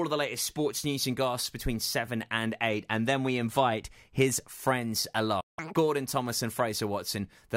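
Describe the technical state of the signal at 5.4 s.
At 5.4 s the playback stalls: the player most likely ran short of buffered data, or its output thread was held up, so it stopped sending samples for about 0.17 s. The speech cuts off abruptly mid-flow at 5.40 s and the output sits in dead silence until 5.59 s, when the sound picks up again. The gap is long enough to hear as a distinct hiccup in the delivery rather than a click.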